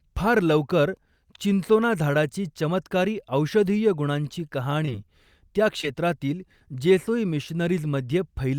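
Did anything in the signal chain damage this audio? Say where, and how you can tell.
Yes. Short concealed packet loss at 4.85–4.89 s and 5.81–5.85 s, a network-stage fault. In each gap about 20 ms of speech never arrived in time, so the decoder extrapolated the preceding sound to fill it and crossfaded back into real audio, leaving a brief smear or wobble.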